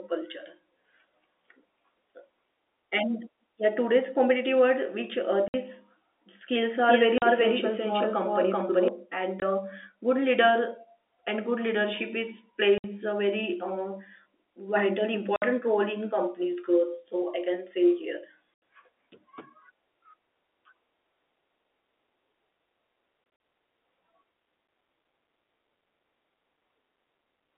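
At 5.48 s the speech drops out for 60 ms. This is packet loss filled with silence. Audio went missing in transit, and the receiver played nothing in its place. The gap starts and ends abruptly.

From 6.70 s to 8.88 s a doubled audio track appears. A second copy of the speech runs about as loud as the first, roughly 0.4 s behind. It is dry, with no room tail. It cuts in and out sharply. The likely cause is the same signal being captured again through a slower path. During this stretch, at 7.18 s, a 40 ms silent hole interrupts the speech.

More silent gaps follow: 20 ms at 9.40 s, 60 ms at 12.78 s, 60 ms at 15.36 s, and 80 ms at 18.54 s. From 23.24 s to 23.40 s, 80 ms is lost in short pieces. The longest run is 40 ms. Every gap is a multiple of 20 ms, which fits 20 ms packets. The speech sits in a narrow telephone band, from 300 Hz to 3.6 kHz.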